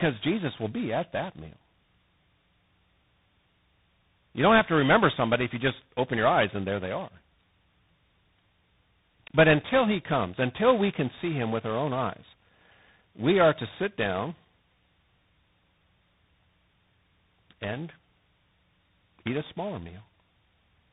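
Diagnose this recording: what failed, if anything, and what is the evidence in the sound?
Codec stage: tandem speech coding, throughout the clip. The speech is rough and noisy, with nothing above about 3.8 kHz. That fits three speech coders in a row, CVSD-style among them, each re-coding the previous one's already degraded output.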